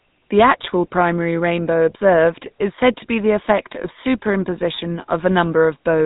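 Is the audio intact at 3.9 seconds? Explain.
No. Lost GSM frames hit from 3.82 to 3.87 s, ending just before 3.9 s. About 50 ms of the signal was damaged, with one 20 ms frame lost. The decoder had nothing valid to use, so it reused the vocal-tract and excitation settings from the last good frame. The gap is briefly held as a rough, metallic ring rather than a clean dropout.

The GSM full-rate codec runs through the whole clip, including 3.9 s itself, and its damage is plainly audible. This codec models the vocal tract and drives that model with regularly spaced pulses, keeping only every third excitation sample. The result fits a 13 kbps full-rate coder. Nothing above 4 kHz survives, so the speech sounds dull and carries a buzzy, gravelly roughness.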